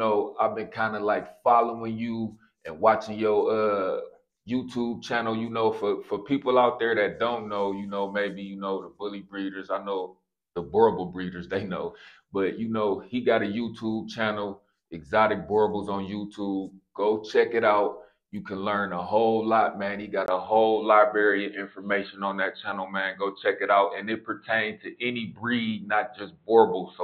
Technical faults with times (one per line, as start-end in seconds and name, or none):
20.26-27.03 input switched to a poorer device